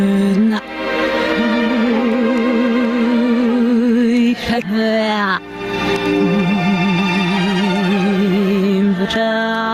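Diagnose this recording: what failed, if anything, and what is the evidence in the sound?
Gain pumping all through: gain ducks roughly 15 dB under loud sounds; likely a fast limiter taming input gain set too high.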